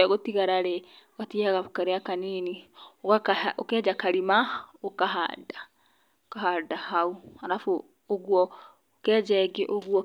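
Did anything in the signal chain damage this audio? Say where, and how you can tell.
No, nothing in this speech recording stood out on listening as damage from any stage of the signal chain.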